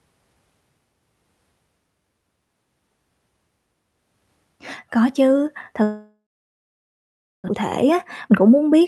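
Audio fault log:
5.83–7.50 s, long network dropout: The sound stops being carried forward normally and the last bit of audio is stretched into a fading buzz, after which about 1.2 s of near-silence follows. When the audio returns, roughly 1.4 s of the original is simply gone. This is likely a stretch where packets stopped arriving, so the receiver filled the gap by extending what it had and then gave up. The delay afterwards sits around a fifth of a second longer.
7.84–8.82 s, jitter buffer speed-up: The closing stretch runs about 11% fast while the pitch stays unchanged, giving the speech a hurried feel. After the gap, the receiver held more buffered audio than it wanted, so it trimmed out short pitch-period-sized slices over and over, roughly a tenth of a second in total, to pull the delay back down. The Opus call path, whose content tops out near 12 kHz, carries all of this.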